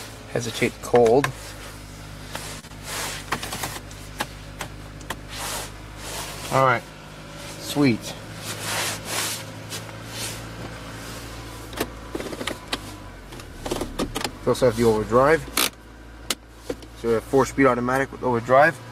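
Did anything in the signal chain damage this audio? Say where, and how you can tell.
Yes. Network jitter buffer: a short stall from a late packet at 2.59 to 2.65 s holds the sound 38 ms; the spectrogram shows frozen, smeared harmonics.

Network loss: short concealed packet loss at 2.67 to 2.72 s replaces 20 ms of missing audio with 23 ms of extrapolated fill, a blurred patch in the waveform.

Buffer catch-up: jitter buffer speed-up from 7.91 to 8.29 s cuts about 40 ms of pitch periods, running at 109% speed; spectrogram events crowd together.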